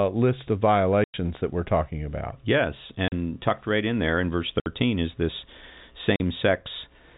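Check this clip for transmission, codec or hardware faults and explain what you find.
You've got packet loss filled with silence, four dropouts over a telephone-band G.711 line. The holes land at 1.04–1.14 s, between "list of" and "that we're talking about"; 3.08–3.12 s, before "tucked right in there"; 4.60–4.66 s, between "in there in verse" and "is this"; and 6.16–6.20 s. Lost packets were replaced with silence, so the sound cuts out with hard edges. The gaps run 100, 40, 60 and 40 ms, which fits 20 ms packets.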